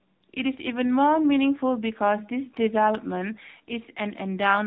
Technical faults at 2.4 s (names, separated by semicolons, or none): AMR narrowband mobile codec